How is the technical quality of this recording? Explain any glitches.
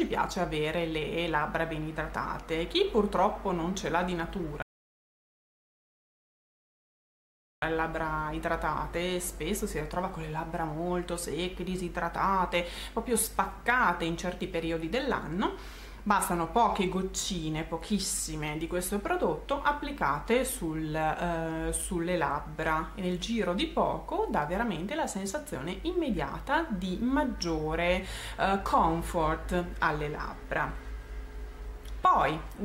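At 4.62 s the sound drops into silence for 3.0 s, then picks up at 7.62 s exactly where it broke off. This is a rebuffering stall: playback used up its downloaded audio and waited for more data, so nothing is lost but three seconds of dead air are added.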